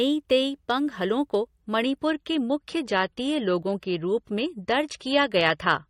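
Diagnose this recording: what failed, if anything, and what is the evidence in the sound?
At the codec and network stage, an adaptive stream at a lower bitrate takes over at 1.62 s and lasts to the end. The speech abruptly turns swirly with codec artefacts, with no gap, which fits a drop from 128 to 34 kbit/s MP3. On a spectrogram there is an overall 18.4 kHz ceiling.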